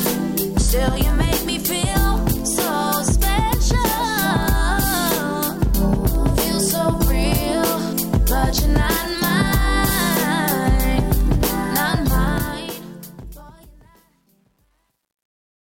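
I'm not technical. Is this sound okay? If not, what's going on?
No. The fade-out's volume control kept too little detail, consistent with a 10-bit stage, causing truncation distortion on a fade. From 12.22 s the fading sound turns gritty, and from 13.34 s to the end it is at its worst.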